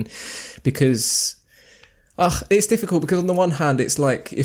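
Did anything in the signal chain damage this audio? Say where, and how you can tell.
No, nothing in this speech clip stood out on listening as damage from any stage of the signal chain.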